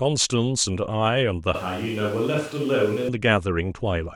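At 1.55 s the speech abruptly turns roomy and hollow. The bass thins out. The overall level stays about the same, but room noise rises to sit roughly 25 dB below the speech. This is a switch to a distant microphone. The close microphone's signal likely dropped out, leaving a pickup further from the talker that captures more room reflection and less low end. At 3.08 s the close sound returns just as suddenly.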